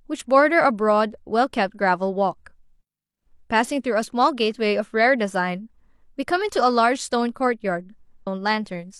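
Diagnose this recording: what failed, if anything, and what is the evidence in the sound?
Near the end, at 8.22 to 8.27 s, the speech jumps abruptly forward with a brief blip, as though part of what was being said was never delivered. The likely cause is a stream segment skipped at the network and playback stage: one chunk failed to arrive and the player carried on with the next. On a waveform the envelope breaks discontinuously there; a spectrogram shows a thin vertical broadband line where the harmonic tracks splice.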